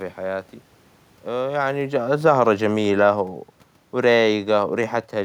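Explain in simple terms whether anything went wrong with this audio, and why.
One thing went wrong: automatic gain falling. From 1.29 s to 3.38 s the system's automatic level control judged the input too loud or its background noise too strong and turned its gain down step by step, so the speech gets quieter and the room noise behind it drops with it. That shared sinking points to the equipment rather than the speaker. Around one and a half seconds in the talker also shifts position, which changes the level at the microphone separately.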